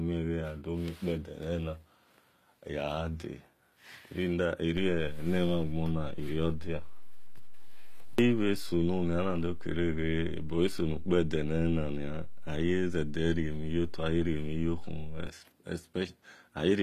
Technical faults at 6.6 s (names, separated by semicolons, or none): HE-AAC compression; DC step